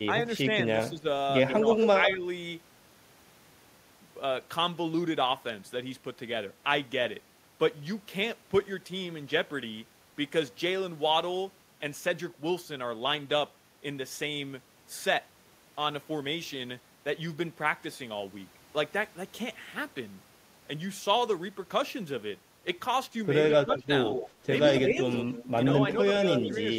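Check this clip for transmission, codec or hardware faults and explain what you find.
Two faults recur in two clusters near the start and end of the speech: short suppression dips and a returning echo.

Speech suppressed in double talk: the voice dips at 0.89–1.05 s, 1.6–2.24 s, 23.56–23.89 s and 24.88–24.97 s, dropping about 5 to 15 dB, deepest at 23.56–23.89 s. The likely cause is an echo canceller muting this talker while loudspeaker sound played simultaneously.

Echo leak: a delayed copy of the voice trails it by 141 ms, from 1.48 to 2.13 s at about 5 dB below the speech and from 23.5 to 26.54 s at about 10 dB below. This is likely loudspeaker sound the echo canceller failed to remove, sent back.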